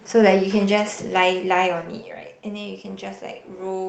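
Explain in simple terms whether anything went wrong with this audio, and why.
Nothing went wrong here.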